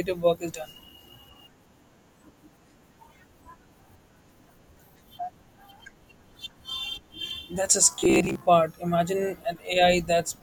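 From 7.92 to 8.49 s the speech turns into robotic sound from repeated short buffers. It becomes a rigid, metallic buzz pitched at about 66.8 Hz, yet it still loosely tracks the speech. The likely cause is audio arriving too slowly for playback. To fill the gaps, a short stretch of about 15 ms is played over and over. That repeat rate sets the fixed buzz. Roughly half of this span is repeated material, so real audio goes missing.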